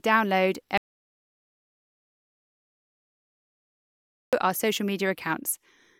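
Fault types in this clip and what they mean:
Audio dropout to silence: the speech cuts off abruptly at about 0.78 s and the track falls to silence, with no room tone or background hiss, until it snaps back at about 4.33 s on "our social". Roughly 3.55 s of material is simply missing. The likely cause is a loss of the input signal, such as a disconnected device or failed link, while the recorder kept writing silence.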